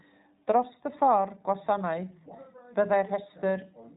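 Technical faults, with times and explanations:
Throughout, iLBC codec: the speech sounds narrow and a little rough and synthetic, with nothing above 3.8 kHz. Each 20 ms frame's excitation is coded on its own without leaning on the previous frame, which fits a 15.2 kbps narrowband VoIP mode, and the damage is plainly audible.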